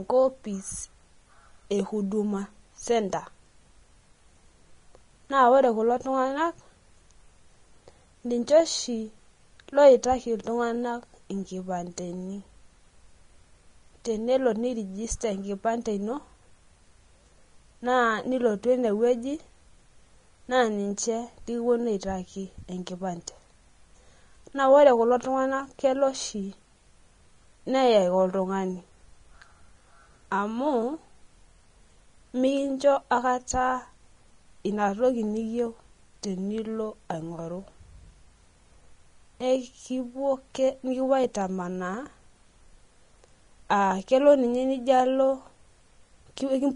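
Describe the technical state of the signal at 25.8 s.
At 25.8 s, as throughout, the speech was likely squeezed by Vorbis compression near 31 kbps, which removes everything above 10.6 kHz and leaves grainy, hissy treble.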